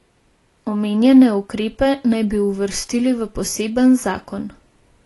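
Speech, and the whole thing carries plainly audible AAC compression damage: nothing survives above about 11.5 kHz, so it sounds dull, with smeared, fizzy sibilants. That's likely AAC-LC squeezed hard, which fits a low bitrate around 32 kbps.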